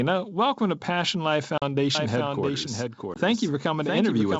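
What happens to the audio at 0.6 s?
Nothing goes wrong at 0.6 s: the speech there comes through intact, carried cleanly by G.722 wideband telephone coding at what sounds like its full 64 kbit/s rate, with at most a faint upper-band hiss.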